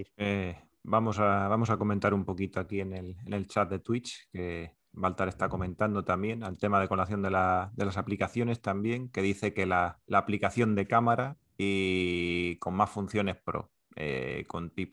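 No technical faults are audible anywhere in this speech recording.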